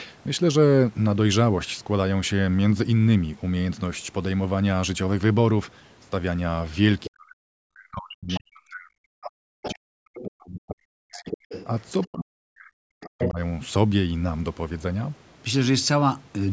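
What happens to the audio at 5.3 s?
Nothing goes wrong at 5.3 s: the speech there runs on intact, carrying only the ordinary band limit of call microphone processing with nothing above 8 kHz.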